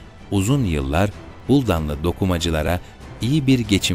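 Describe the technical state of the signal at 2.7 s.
At 2.67 s there's a repeated buffer. Fresh audio didn't arrive in time, so the device played the previous chunk, which fits a 10 ms buffer, one extra time. Because the chunk is so short, you hear a quick click or brief buzz rather than a stutter, with roughly 10 ms of audio skipped.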